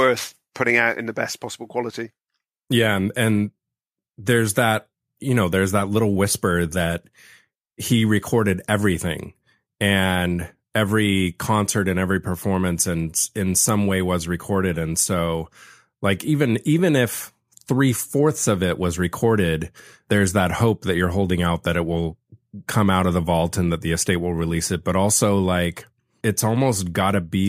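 No technical faults can be heard anywhere in this speech recording. Nothing interrupts or alters the audio at any point.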